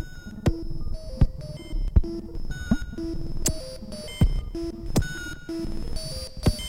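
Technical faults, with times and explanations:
Nothing technical trips up this bit of music; there's no fault to point to anywhere in it.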